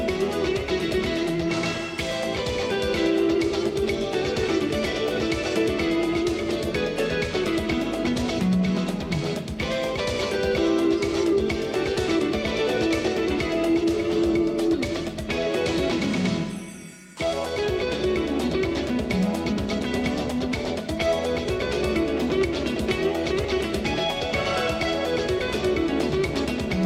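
No technical faults occur at any point in the audio.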